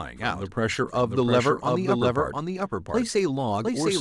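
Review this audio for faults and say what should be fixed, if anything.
A second, slower capture path or an out-of-step edit has likely mixed the speech in twice. Throughout the clip, this doubled audio track places a full-band copy roughly 0.7 s behind, about 5 dB quieter, with no decay or room colour, so every phrase repeats as a flat echo. Remove the extra copy. To prevent it, route each source through one capture path only and check edits for duplicated, offset regions before mixdown.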